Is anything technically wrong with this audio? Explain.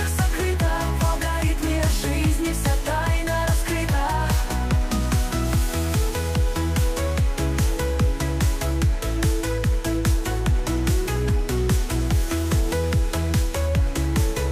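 No, nothing technically wrong is audible anywhere in this audio.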